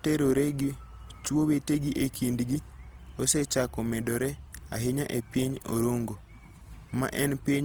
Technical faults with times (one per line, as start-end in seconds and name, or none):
0.00-7.65 Opus compression